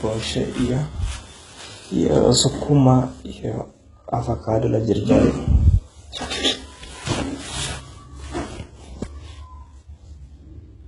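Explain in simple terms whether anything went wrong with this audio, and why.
The speech likely went through heavy HE-AAC compression, which fakes the treble by copying lower sound upward. Throughout, s sounds come out gritty and lispy.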